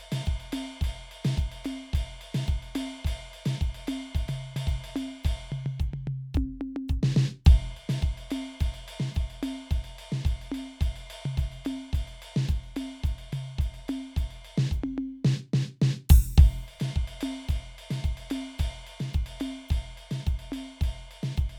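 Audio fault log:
No fault was found in this music.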